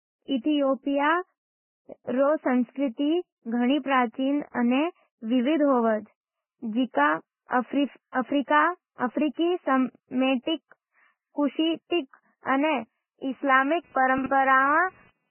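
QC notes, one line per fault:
Throughout: Vorbis compression, likely at a very low bitrate around 8.5 kbps. Nothing remains above 3 kHz, and the treble below that is quantised so coarsely that detail turns to grainy hiss, with roughened tones and blurred consonant onsets. Unlike pre-echo, this damage is constant rather than tied to individual attacks.
8.12, 9.34 and 10.43 s: pre-echo, spreading 31, 36 and 43 ms respectively. A sharp attack sat late in a transform block, so quantisation noise sized for the loud onset also filled the quiet moment before it, producing a brief hiss just ahead of each attack, which then sounds softened. It differs from the steady codec grain because it appears only directly before a transient.
13.84 to 15.3 s: computer activity noise, starting after "अने इस्लामी". A buzz at roughly 300 Hz, around 30 dB below the signal, comes from processor or peripheral load shifting the shared ground of the audio circuit. 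It follows the machine's activity rather than the speech, which separates it from codec noise.
14.18 to 14.26 s: chunks out of order, just after "अने इस्लामी". A 20 ms chunk played three chunks late, so nothing is missing but the sequence is scrambled, with hard joins that make the moment sound jumbled. Unlike a dropout, no audio is lost, only reordered.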